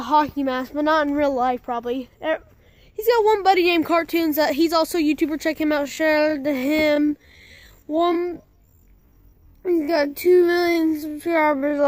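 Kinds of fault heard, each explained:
Time-stretched section: from 5.75 s to the end, the pace abruptly drops to half speed while the pitch stays unchanged. This is likely software lengthening the audio by repeating short fragments, and it leaves that stretch sounding dragging.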